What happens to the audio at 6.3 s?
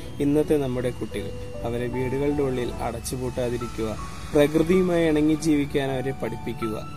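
A switching power supply is whining in an audible burst mode or beating with another one throughout, so at 6.3 s the switching supply whistle persists: a faint tone somewhere between 2.4 and 3.2 kHz, roughly 30 dB below the sound.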